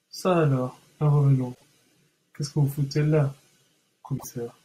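At 1.53 to 1.64 s, and again at 4.17 to 4.24 s, the speech breaks into a brief chirp, squawk, click or short hole caused by damaged data in a compressed stream. Bytes in those stretches were corrupted, so the decoder misread the frames, lost sync and hunted for the next valid header. On a spectrogram each event is a disrupted patch roughly 110 ms and 75 ms wide. The waveform shows an abrupt, irregular break in the speech envelope.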